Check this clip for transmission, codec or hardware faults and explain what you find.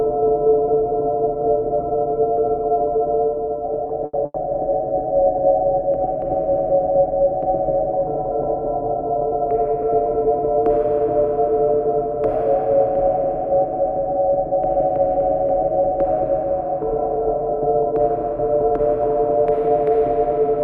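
Network delivery faults show up in this recording of everyday sounds: two short stalls from late packets, a burst of packet loss between them, and later a jitter buffer speed-up.

The short stalls from late packets come at 3.87 to 3.92 s and 4.25 to 4.37 s. Packets arrived late, the buffer ran dry, and the receiver held the last sound for about 20 ms and then 90 ms before resuming where it left off. Each is heard as a brief held sound with a slight buzz or dip. Unlike loss, nothing afterwards is skipped.

The burst of packet loss falls at 4.05 to 4.16 s. Roughly 80 ms of audio never got played. The receiver extended the preceding sound and faded it out, then jumped ahead. The difference from a stall is that the audio resumes past a real gap, so part of the event is missing.

The jitter buffer speed-up runs from 6.72 to 7.28 s. Excess buffered audio was trimmed by cutting many tiny pitch-period slices, removing around 70 ms. 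Playback runs at about 110% speed with unchanged pitch, so the sounds briefly feel rushed, without any dropout or held tone.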